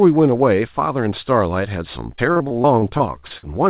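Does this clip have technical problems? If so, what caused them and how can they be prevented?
Yes. From 2.16 to 3.45 s the speech turns choppy and robotic, with small pieces dropping out. This is repeated packet loss: 11 gaps in that stretch, the longest 48 ms and about 260 ms missing in all. Each gap was filled by stretching the previous sound, so about a fifth of the span is synthetic continuation. The narrow, phone-like tone, with nothing above 4 kHz, comes from the G.711 call codec. A steadier network link with less congestion, or a larger jitter buffer, would prevent it.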